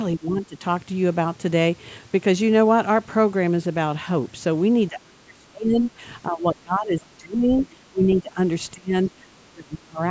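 Between 0.16 and 0.64 s the speech sinks by roughly 15 dB, then from 4.88 to 6.02 s it falls much further, around 30 dB, and again from 6.27 to 7.5 s (about 25 dB), 7.69 to 8.38 s (about 15 dB) and 8.73 to 10.01 s (about 25 dB). These dips are likely speech suppressed in double talk: the echo canceller mistook the talker for loudspeaker echo and attenuated it, leaving the voice thinned and chopped in stretches up to about a second.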